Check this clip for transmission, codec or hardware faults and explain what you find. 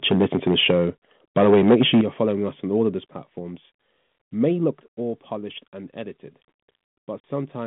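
Three kinds of fault are audible: two stretches of microphone overload, four stepwise drops in microphone volume, and one packet-loss gap near the end, all carried over a narrow telephone band of roughly 150 Hz to 3.5 kHz with light ADPCM-style coding that fits a 32 kbit/s G.726 link.

Microphone overload, 0.11 to 0.86 s and 1.37 to 2.01 s: the input gain was likely set too high, so the louder peaks drive the converter past full scale, by about 7 dB and then about 8 dB. Their tops are sheared flat, a few percent of samples in the first stretch and around a tenth in the second. The result is a gritty, crackling harshness on the strongest syllables, ending just before "you're following us on".

Microphone volume stepped down, at 0.71, 2.01, 3.03 and 4.71 s: the call software likely reacted to the hot, clipping input by cutting the device's input gain in single jumps of about 2, 8, 4 and 5 dB. 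Speech and background fall together abruptly. The deepest drop comes right after the second overload, before "you're following us on". The last falls between "of those platforms may" and "all polished and edited".

Packet loss on an ADPCM call, at 7.36 s: about 40 ms of audio, which points to a couple of packets, is dropped and filled with silence. The decoder's adaptive predictor and step size then no longer match the sender's. A sharp-edged hole is heard, followed by slightly distorted speech before the sound settles.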